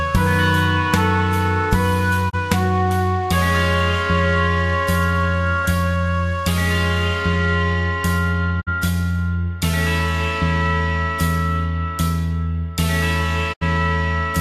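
Digital broadcast dropouts occur at 2.29–2.35 s, 8.60–8.69 s and 13.52–13.63 s. Each time the audio fades to silence over 20 ms as the receiver mutes on lost or corrupt frames. Gaps of 24, 48 and 72 ms fit one, two and three missing frames.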